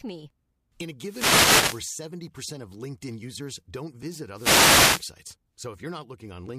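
Wireless microphone noise hits at 1.01 to 1.88 s and, after "users don't visit", 4.32 to 5.09 s: the FM radio link fades, and receiver noise swells into static bursts over the speech.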